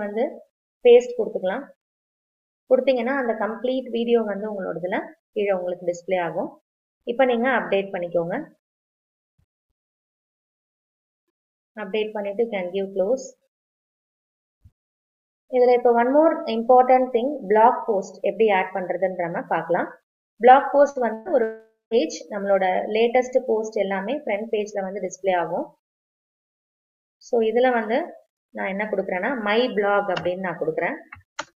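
At 20.89 s a burst of packet loss hits: a short run of packets fails to arrive in time, and the receiver covers about 60 ms by stretching the last sound and fading it, so a brief held buzz or hiss replaces the gap before the audio jumps ahead. A second burst follows at 21.13 s, twice as long at about 120 ms, with the concealment running through to 21.28 s with no fall to silence.

From 21.43 to 21.94 s the stream stops entirely, likely a long network dropout, with roughly half a second of audio lost. The receiver again extends the last sound, but the held tone decays and the final stretch, about 180 ms, goes silent. The sound then resumes later in the material, with that portion simply gone.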